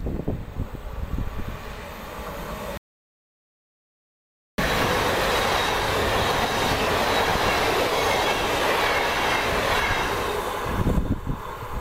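At 2.77 s the sound cuts out abruptly and returns at 4.58 s, leaving an audio dropout to silence of about 1.81 s. The gap holds silence with no room tone, which points to the input likely being lost while recording continued.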